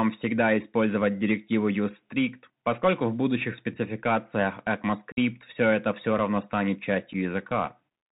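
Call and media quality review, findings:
Bluetooth CVSD headset codec, whole clip. Plainly audible codec damage. Narrowband: nothing above 4 kHz. Granular hiss under the speech. Scratchy s sounds. One-bit up/down coding with an adaptive step that trails fast high content. Fits a 64 kbit/s CVSD link.

Unconcealed Bluetooth headset packet loss, two events. Gap at 5.12–5.18 s, about 52.5 ms missing, after "поскольку в будущих спецификациях" and before "все это все равно". Several consecutive packets likely. Second gap at 7.13 s, about 7.5 ms, after "это все равно станет". Roughly one packet. Abrupt-edged holes filled with silence or idle pattern. Speech returns briefly quieter as CVSD step size re-adapts.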